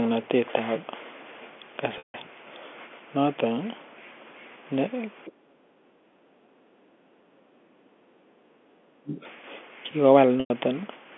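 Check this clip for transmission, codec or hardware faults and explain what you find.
Four kinds of fault appear in this speech clip: two concealed packet losses, a brief scrap of far-end echo, repeated dips in the talker's voice during double talk, and one gated stretch of background.

Packet loss with pitch repetition occurs at 1.98–2.14 s (160 ms, which fits eight 20 ms packets) and at 10.40–10.50 s (100 ms). The receiver repeats the last pitch period as a held buzzy tone that fades within about 50 ms, leaving silence until a short cross-fade. Unlike suppression, a steady, periodic tone fills the gap before it goes quiet.

The other side's voice leaking through appears at 5.25–5.32 s as a fragment about 25 dB under the talker, likely from loudspeaker echo the canceller missed. It is a second, foreign sound added on top of the talker, not a loss of the talker's own signal.

Speech suppressed in double talk occurs at 5.27–5.89 s, 6.48–6.54 s, 6.82–8.20 s and 8.99–9.24 s. 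The talker's voice drops by up to roughly 40 dB, thinning or breaking into pieces, likely because the echo canceller attenuated everything while both sides spoke. The voice itself is affected, not the room sound alone.

Background gated by the echo canceller occurs at 8.48–8.71 s, where the room tone dips by about 14 dB for roughly 200 ms and then recovers.

The call's telephone-band G.711 path, limited to about 250 Hz–3.4 kHz, is normal for this kind of connection.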